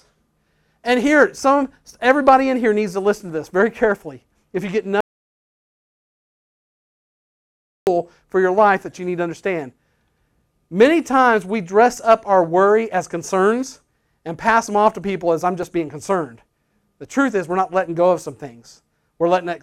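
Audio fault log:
5.01–7.87 s, audio dropout to silence: the speech cuts off mid-flow and returns almost 2.9 seconds later, and the gap in between is dead digital silence with no room tone at all. That points to the input feed likely going missing for a moment, perhaps a loose connection, a link hiccup or a mute toggled by accident, while the recorder kept writing silence. Whatever was said during that stretch is simply gone.
15.63 s, repeated buffer: there's a tiny tick-like stutter here, where one very short slice of audio, about 1.45 ms, gets played a second time straight after itself. A slice that short fits a 64-sample buffer: fresh data didn't arrive in time, so the device replayed the last block. Each join is hard, and because the block is so small you hear a click or brief buzz rather than a recognisable repeat. Only a sliver of audio is lost.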